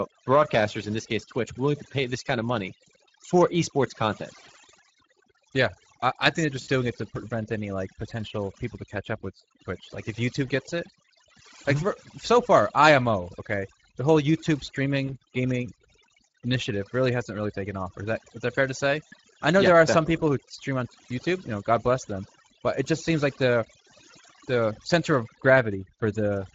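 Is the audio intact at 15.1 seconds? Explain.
No. From 15.07 to 15.16 s, VoIP packet loss concealed by the speech codec: one lost 20 ms frame was extrapolated from prior pitch and filter, leaving a brief, fading smear and weak recovery. Underneath, the Speex codec damage is plainly audible as hoarse, noisy speech, consistent with roughly 16.8 kbps. Overdone noise removal leaves twinkling, warbling specks over a near-silent background.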